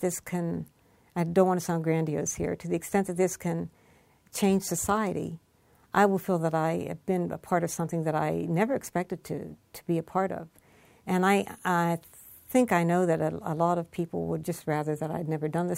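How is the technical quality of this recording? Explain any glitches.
No glitches or technical faults can be heard here.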